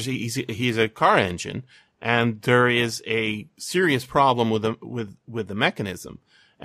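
Speech recording; no technical faults detected.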